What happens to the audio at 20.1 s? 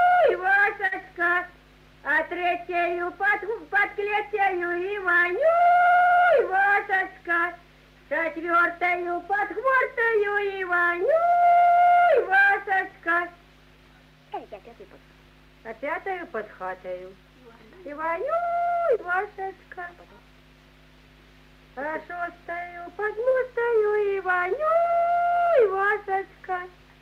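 Nothing goes wrong at 20.1 s. The audio carries straight through that moment with no audible fault.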